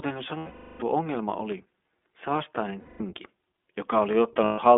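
From start to finish the speech carries iLBC codec damage: the band is confined to about 250 Hz to 3.6 kHz, so a spectrogram shows nothing above that line, and each 20 ms frame is coded on its own, which gives a plainly rough, synthetic edge consistent with the 15.2 kbps mode. Lost iLBC frames then occur at 0.38 to 0.83 s (420 ms), 2.80 to 3.01 s (200 ms) and 4.44 to 4.60 s (140 ms). The decoder repeats the last pitch cycle blended with noise, heard as a held, buzzy vowel that fades over the longest gap. On the waveform these spans appear as repetitive, decaying cycles, with normal speech resuming almost immediately after each.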